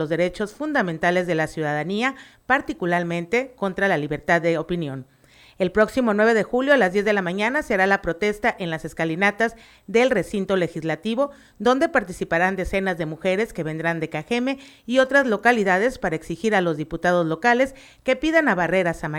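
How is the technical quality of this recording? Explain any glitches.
No glitches or technical faults can be heard anywhere.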